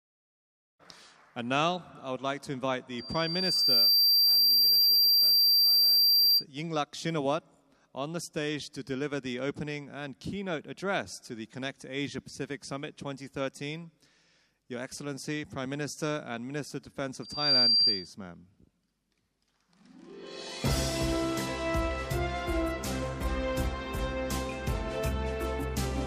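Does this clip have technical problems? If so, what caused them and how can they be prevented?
Yes. Loudspeaker feedback squeal occurs from 2.98 to 6.45 s and from 17.22 to 18.13 s. The loudspeaker's output re-enters the microphone, and a lone 4.7 kHz tone swells to about 10 dB above the sound. Unlike a steady whine, it builds by itself. Moving the microphone away from the loudspeaker or lowering the gain prevents it.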